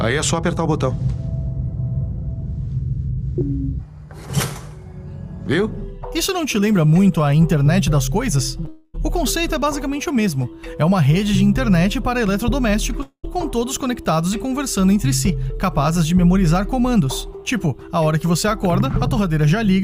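At 8.65 to 8.68 s there is a short concealed packet loss: about 20 ms of audio failed to reach the decoder in time, and the receiver patched the gap by extending the last sound for roughly 10 ms before blending back into real audio. The result is a brief smear or wobble that can swallow a short sound.

Straight after, from 8.68 to 8.96 s, comes what is likely a long network dropout. About 260 ms of audio went missing, and nearly all of it, some 250 ms, was covered by continuing the last sound, so it is heard as a fading buzz or hiss, with no silent stretch before the real audio resumes. A second long network dropout occurs from 13.02 to 13.25 s, again likely. About 220 ms was lost here, about 210 ms of it filled by the same decaying synthetic continuation, and roughly 80 ms of that is silence before playback picks up further on, without the lost part.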